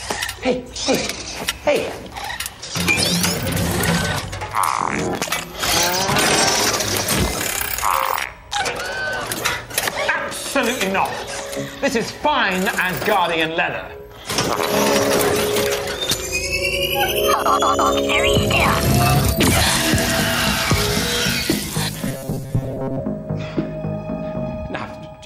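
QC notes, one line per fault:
Throughout: gain pumping. The level keeps breathing, with a swing of about 5 dB. Loud and quiet moments sit closer together than they should, so the whole thing feels squashed. The likely cause is input gain set far too hot, with a fast limiter or compressor clamping down on every peak and letting go in between.
22.08–23.00 s: robotic sound from repeated short buffers. For just under a second the sound turns into a stiff, metallic buzz pitched at 133 Hz that only loosely tracks what was there before. Most of that stretch is recycled audio, not fresh material. This is likely new audio arriving too seldom, with the software looping the last few milliseconds to fill the gap. A 133 Hz buzz fits a repeat of about 7.5 ms.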